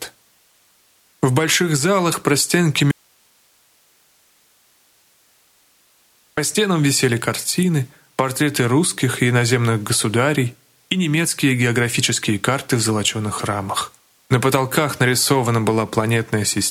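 An audio dropout to a faint residue runs from 2.91 s to 6.37 s, about 3.46 s in which the sound cuts off abruptly and then returns just as suddenly mid-flow. The gap is not silent. It holds only hiss, roughly 40 dB below the normal signal level. That residue points to the wanted signal likely having been lost upstream while the path after the break stayed live, passing its own noise floor rather than a clean pause or fade.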